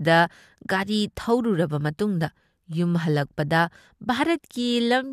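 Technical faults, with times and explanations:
No technical faults heard.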